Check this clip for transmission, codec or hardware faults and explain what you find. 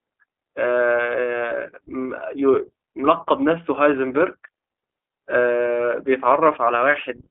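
There's one fault here, and it runs through the whole speech clip: the sound has been through the iLBC codec. The band is squeezed to telephone width, roughly 300 Hz to 3.4 kHz, with nothing at all above 3.6 kHz, so the speech sounds dull and boxy. iLBC codes each 20 ms frame's excitation on its own, and at this rate, which fits its 15.2 kbps mode, you can plainly hear a slightly rough, synthetic graininess riding on the speech.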